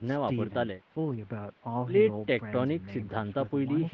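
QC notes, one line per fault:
Nothing to flag on this one: the speech has simply been through an ordinary call chain, with the microphone processing and the call codec leaving nothing above about 8 kHz, which is just what that path does.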